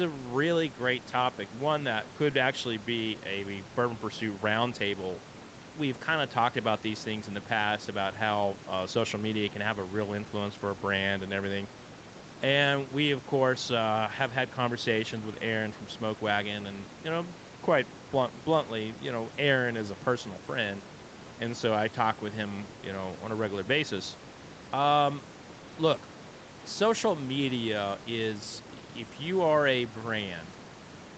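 Nothing stood out on listening to this speech clip; the room noise sits about 19 dB below the speech, and the sound is band-limited at 8 kHz, which fits a call path.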